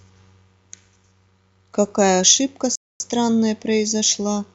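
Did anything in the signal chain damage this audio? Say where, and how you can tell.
Yes: a rebuffering stall at playback, where the player exhausted its downloaded buffer and paused, leaving silence from 2.75 to 3.00 s before the speech resumes exactly where it stopped, adding about 0.25 s.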